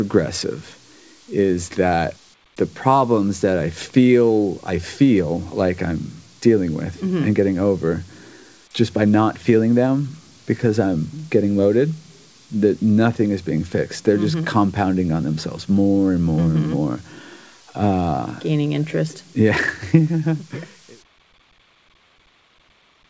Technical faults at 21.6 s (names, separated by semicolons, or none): none